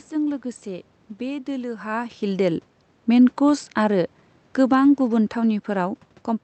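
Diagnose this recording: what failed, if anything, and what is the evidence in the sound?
The failure is in call processing: automatic gain falling. From 2.25 s to 6.0 s the level eases down by about 5 dB. The giveaway is that the room noise sinks right along with the speech, so it isn't the talker shifting position, which happens around 1.5 s and again near 6 s. The AGC decided the input was too loud, or its background noise too strong, and slowly pulled its gain back.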